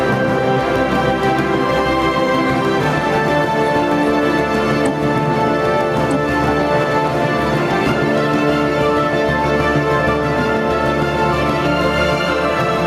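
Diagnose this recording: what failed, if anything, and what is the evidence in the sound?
Gain pumping runs through the whole recording. The gain gets shoved down each time a loud sound arrives, a swing of around 5 dB, so loud and quiet parts sit unnaturally close together and everything feels squashed. The likely cause is input gain set far too hot for the mic, with a fast limiter or compressor in the processing chain clamping down on every peak and then letting go.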